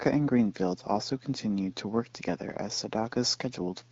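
Nothing in this speech clip stands out as a technical problem. It carries the bandwidth of the AMR wideband (HD Voice) codec at 12.65 kbit/s, with only light coding colour and the upper band near 7 kHz filled in by shaped noise.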